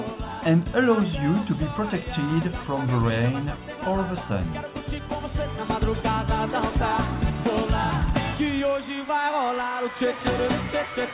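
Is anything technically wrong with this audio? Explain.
No, nothing stood out on listening; the audio comes through a call connection whose narrowband coding leaves nothing above about 4 kHz, as expected for that kind of link.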